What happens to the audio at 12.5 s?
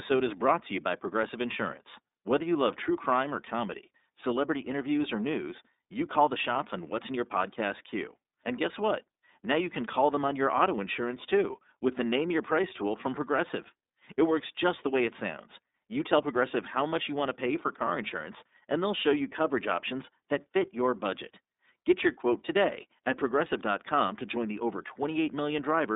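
At 12.5 s the speech carries the iLBC codec, present across the whole clip. It sits on a telephone-style line of about 250 Hz to 3.7 kHz, with nothing above 3.8 kHz. iLBC codes each 30 ms frame's excitation on its own, which fits its 13.33 kbps mode. The damage is plainly audible. Sibilants lose their top end. The voice sounds thin, slightly rough and synthetic.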